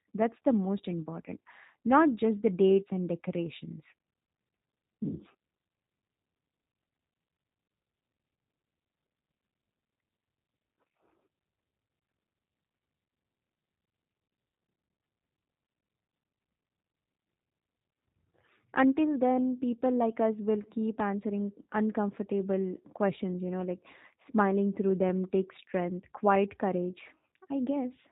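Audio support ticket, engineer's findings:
G.729 codec in the path throughout, consistent with an 8 kbit/s G.729A stream: speech rebuilt from a vocal tract filter, pitch predictor and sparse pulses per 10 ms frame. Nothing above 4 kHz, plainly audible rough, synthetic, buzzy texture across the whole clip.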